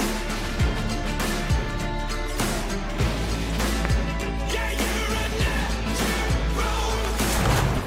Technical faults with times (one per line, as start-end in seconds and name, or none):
3.85-3.87 loud pop
7.05-7.21 loud pop